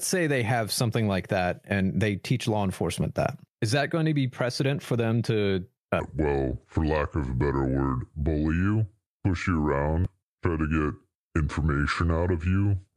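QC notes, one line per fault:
6.0–12.97 s, section at the wrong speed: Right after "precedent for them to", the rest of the audio plays at about 0.72 times its original speed, so it runs slow and drops roughly five semitones, sounding deep and dragged. Pitch and tempo fall together because the samples are simply read out more slowly. The likely cause is an editor or player handling that stretch against the wrong clock rate, so it no longer matches the first half.
10.02–10.07 s, damaged data in a compressed stream: Inside the slowed section, a brief blip of about 45 ms breaks the sound. At this point some bytes in the encoded stream were corrupted, so the decoder could not read those frames correctly. It produced a short glitch while it lost sync and searched for the next valid frame header. Playback then resumes from that frame.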